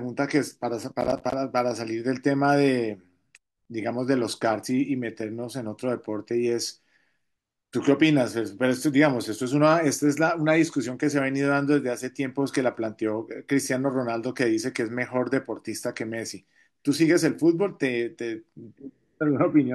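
From 1.01 to 1.34 s processor overload crackle rides on the speech. Around fifteen buffer deadlines are missed over that stretch, each leaving a hard-edged gap of silence, which fits buffers of roughly 10 ms. Unlike a single dropout, this is dense gritty tearing.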